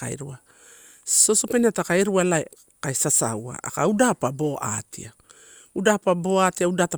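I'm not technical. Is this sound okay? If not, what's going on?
Yes, there are no technical faults to hear here.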